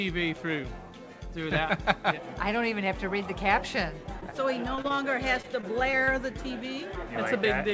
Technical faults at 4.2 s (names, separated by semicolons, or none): short concealed packet loss